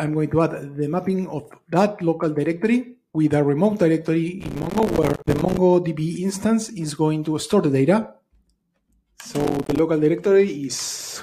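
Processor overload crackle tears through the audio at 4.41 to 5.58 s and again at 9.40 to 9.79 s. Many buffers, around 5 ms each, miss their deadline and drop to silence, leaving gritty, hard-edged gaps.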